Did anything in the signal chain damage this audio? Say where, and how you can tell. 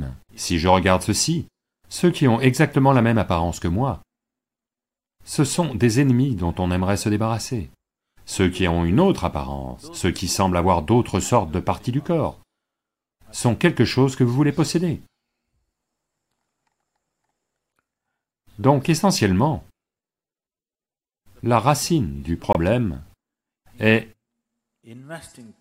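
Yes. At the codec stage, a corrupt frame was muted: just after "la racine du", the speech drops abruptly to silence from 22.53 to 22.57 s, a 42 ms hole that fits about three rejected frames. The waveform shows a flat line with hard edges, and the spectrogram shows a clean full-band vertical gap, with timing preserved on either side.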